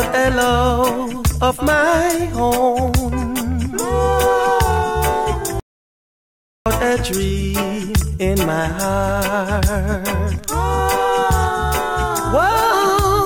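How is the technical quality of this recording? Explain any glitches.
There's one glitch: an audio dropout to silence from 5.60 to 6.66 s, about 1.06 s of dead silence, likely a lost input link while recording continued.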